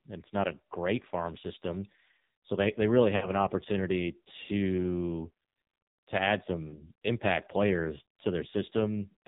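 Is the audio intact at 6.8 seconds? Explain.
No. Lost AMR speech frames disrupt the audio from 6.68 to 6.87 s, between "to add" and "impact players". About 40 ms of the coded stream failed to arrive intact, which fits two 20 ms frames. The decoder filled the gap by repeating the last good pitch and vocal tract settings at falling gain, so the sound smears, thins into a brief synthetic warble, and returns rough for a moment.

This happens inside heavy AMR narrowband mobile codec damage present throughout. At 5.9 kbps, only a handful of pulses drive the vocal tract model, which gives a buzzy, synthetic quality. Nothing above 4 kHz passes.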